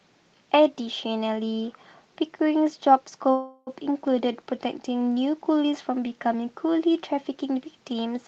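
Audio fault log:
3.31–3.70 s, call audio freeze. The speech stalls and the last sound is stretched into a fading buzz for about 355 ms, ending in a brief near-silence of about 10 ms. Packets were likely held up in transit, leaving the jitter buffer empty. When they arrive, the speech resumes from where it stopped, so nothing is lost. Everything after the freeze now runs about 355 ms late. Across the clip, the call path's audio stops at 8 kHz.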